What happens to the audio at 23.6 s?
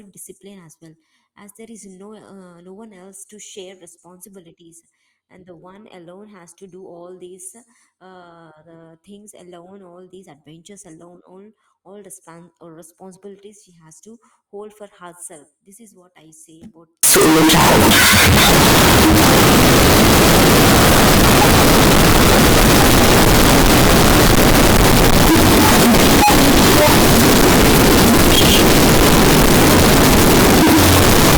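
At 23.6 s you're in the middle of a signed and unsigned mix-up that runs from 17.03 s to the end at 31.37 s. The 16-bit samples were likely read with the wrong sign convention, so every zero crossing jumps across the full range. It comes out as brutally loud, harsh distortion, with quiet stretches just as loud.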